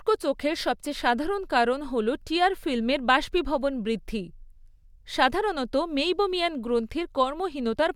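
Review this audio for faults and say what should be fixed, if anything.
Nothing needs fixing; no faults are audible here.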